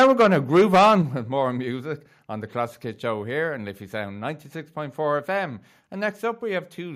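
From the start to 0.95 s the speech is hit by microphone overload. The input was likely set too high, so peaks drove about 8 dB past the converter's ceiling and roughly a tenth of the samples were flattened at the limit. The loudest syllables get a harsh, crackling, buzzy edge. A limiter or compressor would only make the speech sound squashed. Here the wave tops are actually cut off, so the loud moments sound gritty.

At 1.02 s comes a microphone volume step-down. Voice and background fall together by about 6 dB in one instant, likely the call software reacting to the clipped peaks before it by cutting the device's input gain. A second, smaller step of about 1 dB follows at 2.04 s, between "with more music" and "on the". A fade or automatic gain control would ride the level gradually. These drops are abrupt and then hold steady.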